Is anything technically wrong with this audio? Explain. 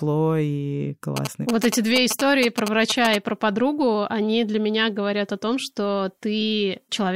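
Yes. From 1.17 to 3.16 s, just before "и про подругу они", a galloping dit-dit-dit of short buzzes cuts through the speech, only slightly quieter than the voice. This is GSM signalling interference. A nearby 2G phone, exchanging control traffic with the network rather than carrying a call, emits brief clusters of radio bursts. The audio circuitry rectifies them into the signal, and their pulse rate shows up as the buzz tone at about 217 Hz.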